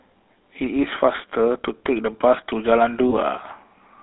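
A speech clip carried through the GSM full-rate codec, with plainly audible buzzy, gravelly roughness consistent with 13 kbps coding; a spectrogram shows energy confined between 200 Hz and 3.7 kHz. From 3.1 to 3.13 s, one lost GSM frame was patched by repeating the previous frame, giving a brief metallic ring visible as a short smeared, flattened patch in the spectrogram.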